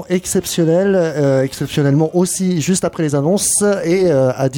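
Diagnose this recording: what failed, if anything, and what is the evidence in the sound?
Nothing failed; no fault is audible anywhere here.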